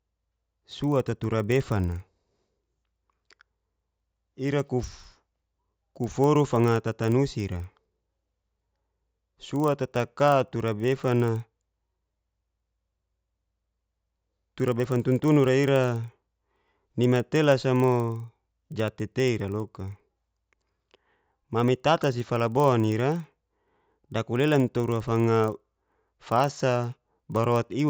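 From start to finish the speech carries a resampler restarted on every block. The rate conversion, which fits an upsample from 16 kHz to 48 kHz, was run on each 40 ms block in isolation, so each block edge was computed without its true neighbouring samples and left a small discontinuity. Those errors repeat at 25 Hz, heard as a steady ticking or low buzz that rides on the speech and drops away in the pauses.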